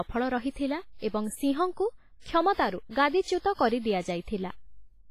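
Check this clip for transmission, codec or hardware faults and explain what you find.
One codec fault runs through the whole clip. Throughout, the speech carries heavy WMA compression damage, likely from a low-bitrate encode. Long transform blocks smear quantisation noise, so it rings and washes, with breathing hiss. Nothing sounds above 15.4 kHz, which fits roughly 24 kbps.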